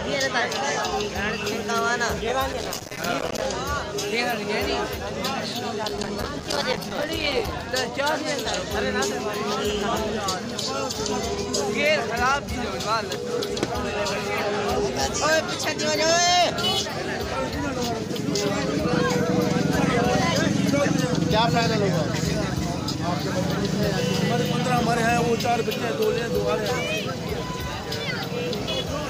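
From 2.53 to 3.46 s, and again from 5.84 to 7.52 s, there's processor overload crackle. The processor keeps missing its deadlines, leaving dozens of tiny silent gaps, each fitting a buffer of around 5 ms, so the sound tears into gritty crackle until the load eases.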